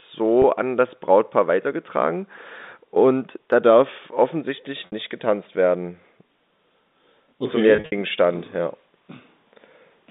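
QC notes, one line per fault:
0.42–0.44 s: packet loss with pitch repetition. A 20 ms gap was filled by repeating the last pitch period, giving a slightly held buzz just before "an das".
4.86–4.92 s: packet loss with pitch repetition. 60 ms went missing after "und da darf offensichtlich". The repeated pitch cycle makes a brief buzzy hold, fading before "nicht getanzt werden" resumes.
7.76–7.92 s: packet loss with pitch repetition. About 120 ms was lost in scattered bursts, the longest 60 ms. The repeated bridging sounds like a series of slightly held, buzzy notes.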